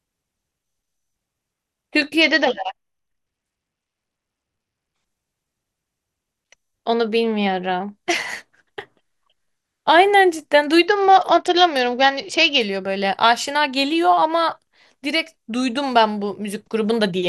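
Speech, carried over a Bluetooth link that twice suffers a Bluetooth SBC bit pool drop: from 2.22 to 4.95 s and from 10.87 to 12.61 s the encoder cuts its bit allocation, which fits a bit pool falling from 28 to 9, near 78 kbps. Starved of bits, the highest sub-bands lose their share and the remainder are coarsely quantised, so the treble goes dull and a gritty noise rises until the rate recovers.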